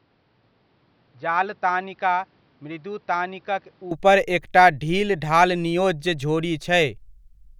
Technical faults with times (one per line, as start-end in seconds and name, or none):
0.00-3.91 input switched to a poorer device